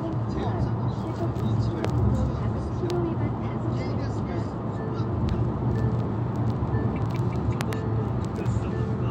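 A loud pop at 1.85 to 1.87 s stands out around 20 dB above the audio, with a double pop at 7.61 to 7.75 s. Each is likely a voltage pulse from a plug, switch, static or driver glitch, heard as a sharp thump over continuing sound.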